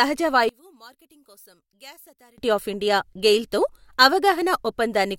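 From 0.49 s to 2.38 s the speech collapses to a faint trace when heard in mono, dropping by about 27 dB, with the centred voice and low end nearly gone until it returns at full level on "ఆఫ్ ఇండియా గెయిల్ తో". The likely cause is one channel inverted: with one stereo side flipped in polarity, the material common to both sides cancels on summing, leaving only the small difference between them.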